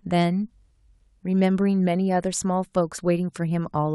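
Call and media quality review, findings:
Nothing in the speech recording stood out on listening.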